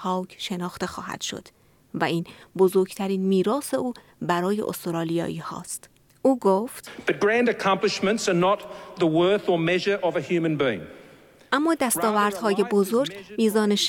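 No technical faults can be heard anywhere in the audio.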